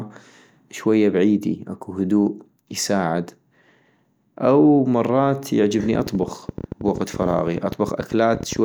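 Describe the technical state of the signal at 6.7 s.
At 6.7 s the speech sits inside a train of clicks running from 5.80 to 8.57 s: about 13.4 ticks per second at uneven spacing, around forty in all, peaking a few decibels above the speech. The likely cause is interference from nearby equipment or a faulty connection or power supply injecting repeated pulses. The clicks keep much the same shape and continue through pauses, which sets them apart from isolated dropouts or clipping that would follow the speech level.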